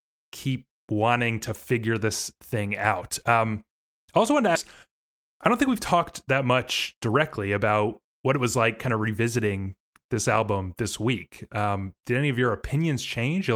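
At 4.55 to 4.57 s, right after "I also wanted to", there is a skip ahead. Roughly 0.7 s of speech was dropped while later audio waited. Playback jumps straight on with no fill. The join is abrupt and the delay falls by a similar amount.

Jitter buffer speed-up follows, from 4.86 to 6.54 s and again from 6.94 to 8.38 s, ending before "was like kind of". The buffer held too much audio. Tiny pitch-period slices were cut repeatedly, about 100 ms in total each time. Speech runs 6 to 7% fast at unchanged pitch and sounds hurried.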